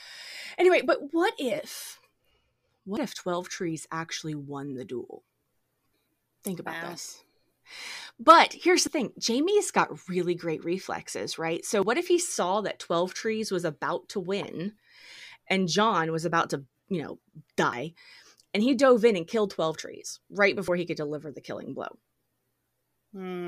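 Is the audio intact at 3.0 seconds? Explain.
No. At 2.97 s there is audio missing between chunks: roughly 50 ms vanishes and the two sides butt together with no silence, a sudden skip. That seamless join separates it from a dropout's silent gap. The likely cause is a recorder handling 3-second chunks.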